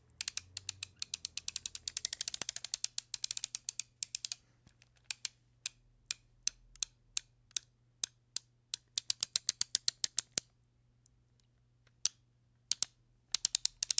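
Nothing here is faulty; the sound simply carries the mark of call microphone processing, with its lowest bass trimmed away and nothing reaching above about 8 kHz, which is just how that path behaves.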